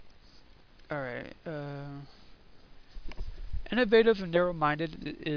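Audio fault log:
There is no fault in this audio.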